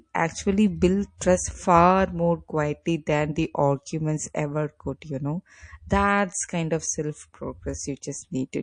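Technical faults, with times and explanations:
throughout, MP3 compression: The speech has a plainly audible watery, swirling texture, with weak detail flickering in and out from frame to frame. Sibilants turn metallic and consonant attacks smear. This is likely low-bitrate MP3 coding, at a rate that fits roughly 40 kbps. The encoder runs short of bits and zeroes quiet frequency lines it judges unimportant.
1.18–1.21 s and 2.83–2.86 s, pre-echo: A short burst of hiss comes just before a sharp onset. The first follows "actually build" and precedes "trust far more". It lasts about 33 ms at about 19 dB above the surrounding noise. The second follows "build trust far more" and precedes "than the arguments ever". It lasts about 30 ms at about 13 dB. The coder kept a 52 ms window and never switched to short blocks, so quantisation noise sized for each loud attack spread back into the quiet moment before it and softened the onset.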